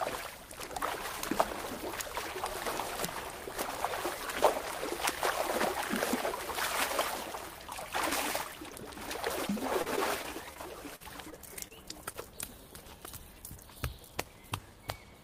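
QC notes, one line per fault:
8.70 s, 11.30 s, 11.68 s, 12.13 s: short concealed packet loss. About 20 ms of audio failed to reach the decoder each time, and the receiver patched the hole by extending the preceding sound before blending back, leaving a brief smear or wobble where that fragment should be.
9.47 to 10.58 s: repeated packet loss (robotic sound). Five separate gaps, the longest 40 ms and about 100 ms missing in all, were each filled by continuing the last sound, so this stretch turns choppy with small pieces absent.
10.96 to 11.02 s: burst of packet loss. Around 40 ms went missing in one run, and the concealment held the last sound while fading it out, so a buzz or hiss briefly stands in before the audio picks up further along.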